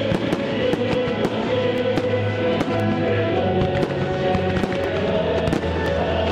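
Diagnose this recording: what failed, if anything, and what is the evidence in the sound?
Periodic USB or driver dropouts run from about 1.78 s to 5.86 s: about five short ticks, spaced exactly 1.024 s apart, each a gap of roughly a millisecond filled with silence. The failure is at the driver or buffer stage. Something blocks the USB bus or audio driver on a fixed schedule, the buffer runs dry, and a sliver of samples is lost. The rigid spacing points to a timed background task rather than random overload.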